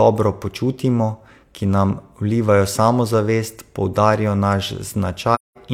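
From 5.34 to 5.57 s, AAC frame loss with muting zeroes the missing frames, so the speech fades out into a soft-edged 213 ms silent gap.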